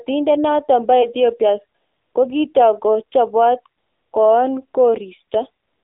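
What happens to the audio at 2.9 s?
At 2.9 s the speech is passing through the AMR narrowband mobile codec, as it does for the whole clip. The speech is rebuilt from a vocal-tract model driven by sparse pulses in 20 ms frames, at what sounds like a low rate near 7.4 kbps, within a 300 Hz to 3.6 kHz band. The result is thin, buzzy, synthetic-sounding speech with plainly audible codec damage.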